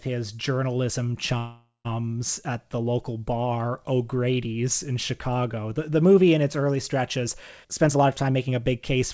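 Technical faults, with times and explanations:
1.38–1.87 s, call audio freeze: right after "his journalism" the sound stalls for about 0.49 s, held as a fading buzz or hiss that ends in roughly 0.15 s of silence, then resumes with "at the local bar". Likely delayed packets emptying the jitter buffer; nothing is lost, only a gap inserted.
7.64–8.96 s, jitter buffer speed-up: after "in its early stretches" the audio runs about 19% fast at unchanged pitch and sounds hurried. The buffer shed surplus delay by repeatedly cutting pitch-period-length slices, roughly 0.3 s in total, over this stretch of the G.722 call path.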